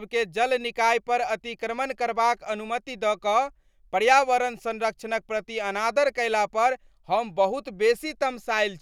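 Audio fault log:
No technical faults detected.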